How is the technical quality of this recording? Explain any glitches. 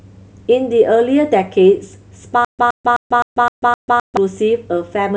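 There's one real glitch: a stutter with silent gaps from 2.45 to 4.17 s. A 118 ms burst of the speech repeats six times, each followed by about 141 ms of digital silence, pulsing every 259 ms. Likely a stalled stream replaying its last fragment on every retry, so the audio meant for that stretch is simply gone.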